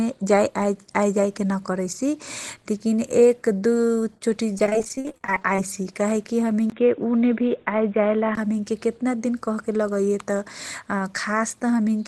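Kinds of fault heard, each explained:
Repeated packet loss (robotic sound): from 4.53 to 5.58 s the speech breaks into rapid holes, each under 40 ms and patched by stretching the previous sound, so roughly a third of that second turns choppy. A spectrogram shows smeared, repeated slices with abrupt edges.
Input switched to a poorer device: between 6.70 and 8.37 s the speech turns dull and boxy after a 20 ms dropout, most likely a change to a narrower microphone. On a spectrogram everything above 3.8 kHz vanishes, while the level stays about the same and faint new background noise appears.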